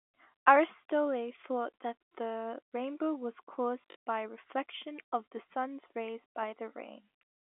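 Right after "that the rainbow was", around 3.89 to 3.95 s, there's packet loss with the last packet repeated: missing chunks get filled by replaying the last one received, giving a brief buzzy robotic stutter before "by reflection of the".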